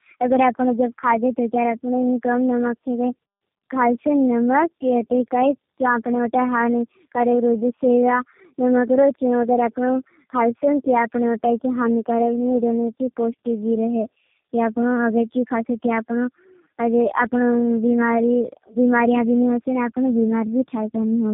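From start to finish the speech carries tandem speech coding: it sounds as though it passed through several low-rate speech codecs in a row, likely three, with the audio decoded and re-encoded at each hand-off so every coder mangled the previous one's output. Nothing reaches above 3.2 kHz, which accounts for the muffling, but what separates this from a single narrowband codec is the compounded roughness and the warbly, smeared texture on every phrase.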